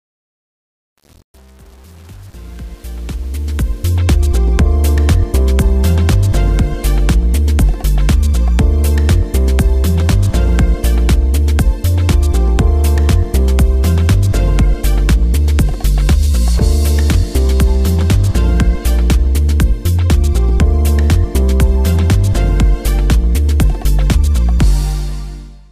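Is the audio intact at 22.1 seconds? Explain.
Yes, the audio is intact at 22.1 seconds, with no fault present at that moment.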